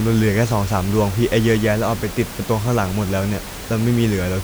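No technical faults can be heard in the speech, and the room noise sits about 14 dB below it as part of the recording rather than any failure of the system.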